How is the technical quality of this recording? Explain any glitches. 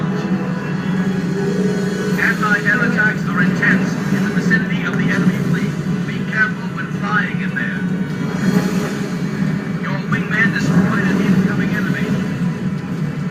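The technical quality holds up with no glitches to explain.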